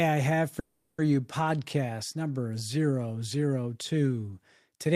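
At 0.59 s, just after "I have", the audio stalls in a call audio freeze lasting until 1.01 s. The last sound is stretched into a fading buzzy fill for about 390 ms with no drop to silence, and then the speech resumes where it left off, with nothing audibly lost. The likely cause is late packets draining the jitter buffer, so the receiver padded the wait and everything after it is shifted about 390 ms later.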